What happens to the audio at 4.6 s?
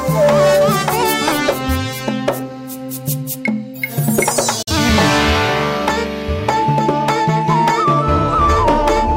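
The sound fades out over about 8 ms into a brief silent hole from 4.62 to 4.73 s: a digital broadcast dropout, where the receiver muted over what sounds like a single lost frame.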